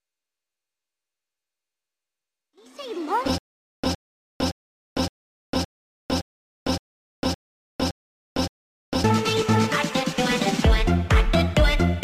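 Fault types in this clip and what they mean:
Stutter with silent gaps: from 3.38 s to 9.04 s the same 112 ms fragment of sound plays ten times, each burst followed by about 454 ms of dead digital silence, so it repeats at a steady 566 ms pace like a stuck skip. Nothing new is heard across that stretch, and the audio meant to fill it is gone. This likely comes from the player or stream stalling, replaying its last buffered fragment on each retry and then running empty.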